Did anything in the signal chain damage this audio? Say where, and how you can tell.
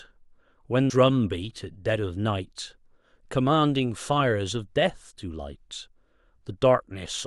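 Yes, at playback: a CD skip at about 0.90 s. A brief tick marks the spot, and the speech then carries on from a different place rather than continuing smoothly. A jolt or disc flaw threw the laser onto another turn of the spiral, so the player muted for a couple of milliseconds and resumed elsewhere on the disc. On the waveform this appears as a tiny gap and an abrupt discontinuity. On the spectrogram it is a thin vertical broadband line where the speech pattern breaks.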